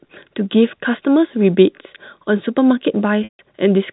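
At 3.24 s the speech breaks into packet loss with pitch repetition, lasting until about 3.39 s. Roughly 150 ms of audio never arrived, consistent with several consecutive packets, so the receiver looped the last pitch period, giving a held, buzzy tone that fades before the G.711 telephone-band speech resumes.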